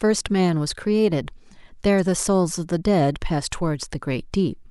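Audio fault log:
1.98–2.00 s, damaged data in a compressed stream: a short run of the encoded speech stream arrived corrupted, so the decoder could not read those frames correctly, lost its place in the bitstream and had to hunt for the next valid frame header before playback could resume cleanly. What reaches the ear is a brief chirp, squawk, click or short hole of roughly 26 ms, cutting across the speech for that instant.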